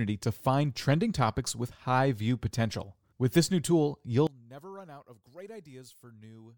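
Right after "this new tool", at 4.27 s, the speech level collapses by about 22 dB and stays low to the end at 6.58 s. The likely cause is one channel inverted: in a mono sum, the content shared by both channels cancels, leaving only their difference.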